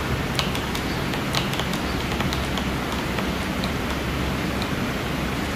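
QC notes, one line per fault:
Throughout: doubled audio track. A second, full-band copy of the sound runs about a second behind the original at much the same level, so every event is heard twice with no decay or room colour on the repeat. The likely cause is a second capture through a slower path. On a waveform each burst reappears a second later at equal height; on a spectrogram every pattern is duplicated, shifted right by about one second.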